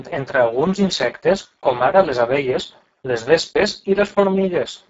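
From start to finish the speech carries Speex codec damage, and it is heavy. The excitation signal is starved of bits, so voiced sounds come out hoarse and grainy, drifting toward a buzzy, robotic quality in the worst stretches. That degree of coarseness points to a very low bitrate, in the region of 6 kbps. Nothing is present above 7.7 kHz, and the upper band below that edge sounds like shaped noise fill rather than real detail.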